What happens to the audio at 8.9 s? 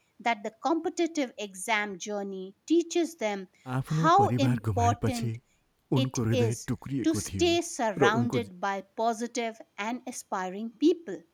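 Nothing goes wrong at 8.9 s; the speech carries on intact through that moment with no dropout, click or distortion.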